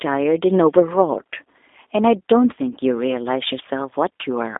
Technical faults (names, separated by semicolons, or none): G.729 codec